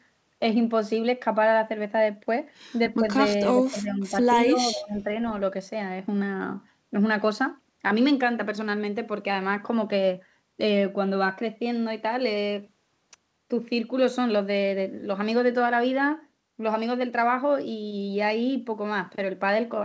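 At 3.55 to 4.15 s, and again at 4.5 to 5.19 s, the speech is ducked in short stretches. This points to speech suppressed in double talk. With both sides talking at once, the echo canceller likely could not separate the near talker from loudspeaker echo, so it turned everything down together. The first dip reaches about 10 dB and the second about 15 dB, and the voice audibly sinks in level each time. Throughout, nothing extends above 8 kHz, as expected from the call codec.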